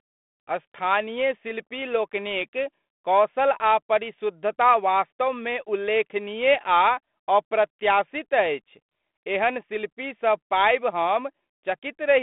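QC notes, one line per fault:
No faults to note; the speech comes through the 32 kbit/s G.726 telephone path with nothing above about 3.8 kHz.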